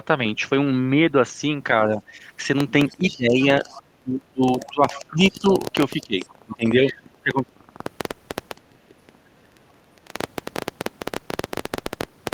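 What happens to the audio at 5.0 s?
Around 5.0 s, an irregular ticking runs over the speech, close to 12 clicks per second, with the loudest peaks standing roughly 15 dB above the signal. This train of clicks starts at 2.60 s and continues to the end of the clip, audible in the gaps as well as under the speech. Something is likely injecting repeated pulses of much the same shape, such as interference from nearby equipment or a faulty connection or power supply.

At the same point, the speech is being turned down. From 2.92 s to 5.63 s it sinks and recovers in patches adding up to about two seconds, at its deepest around 20 dB quieter. This is speech suppressed in double talk, likely from an echo canceller that could not tell the local talker apart from loudspeaker echo while both sides spoke, so it attenuated everything it picked up.

Just before 5.0 s, from 4.93 s to 4.99 s, a brief scrap of the other side's voice leaks through, faint at roughly 20 dB below the main speech. 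The echo canceller likely missed part of the far-end audio, so a short piece of the loudspeaker signal reached the microphone and survived into the recording.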